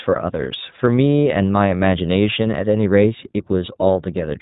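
iLBC codec coding runs from start to end of this speech clip, and the damage is plainly audible. Everything above 4 kHz is gone, so sibilants lose their hiss and the sound is narrowband and boxy. Each short frame, consistent with 20 ms at about 15 kbps, has its excitation coded on its own rather than built from the frame before, and that gives the voice a rough, slightly synthetic, buzzy edge.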